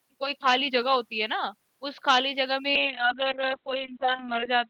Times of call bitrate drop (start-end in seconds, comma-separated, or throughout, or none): 2.76-4.70